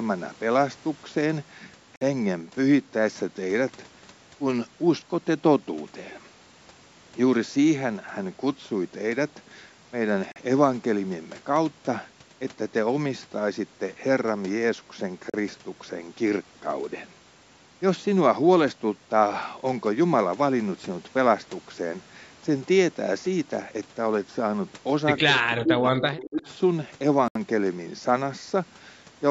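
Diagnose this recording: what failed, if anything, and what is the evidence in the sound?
The wireless playback link is the likely point of failure: the Bluetooth stalls look like interference delaying packets until the headphones' buffer emptied. Each one is a clean dropout to silence, after which the speech resumes where it left off. The gaps fall at 1.96 to 2.01 s (52 ms), 10.32 to 10.36 s (40 ms), 15.30 to 15.34 s (38 ms) and 27.28 to 27.35 s (73 ms). All are too brief and abrupt to be pauses in delivery.

In the call processing, the echo canceller likely struggled with double talk. Unable to separate the local talker from loudspeaker echo, it clamped down on everything, so this is speech suppressed in double talk. From 25.24 to 26.42 s the speech sags and breaks up, with roughly a second of it affected and the deepest cut about 30 dB. That pumping loss of level comes from the suppressor, not from the talker.

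Near the end of that stretch the canceller let some loudspeaker pickup through, most likely an echo leak from a side playing the call aloud. From 26.13 to 26.5 s a faint delayed copy of the speech trails the original by 203 ms, about 15 dB below it.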